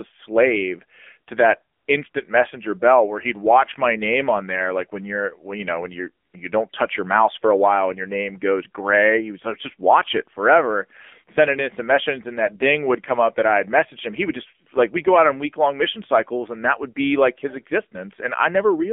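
AMR narrowband mobile codec damage runs throughout this speech: the band is confined to roughly 250 Hz to 3.5 kHz, and the buzzy, synthetic timbre points to a low rate near 7.4 kbps. AMR comfort noise interrupts at 1.76–1.88 s, 2.10–2.14 s, 6.26–6.34 s and 6.70–6.72 s, where speech frames stop for 120, 40, 80 and 20 ms and smooth synthetic noise fills the gaps.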